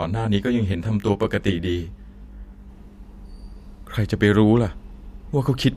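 Channel delay (comb filtering) runs from 0.0 to 2.69 s. One channel arrives roughly 20 ms late, and summing to mono cancels shared content at evenly spaced frequencies, starting near 30 Hz. The speech sounds rough or slightly doubled.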